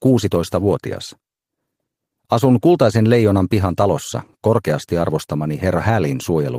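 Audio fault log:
No faults can be heard anywhere in the audio. Nothing in the sound calls for an entry in this log.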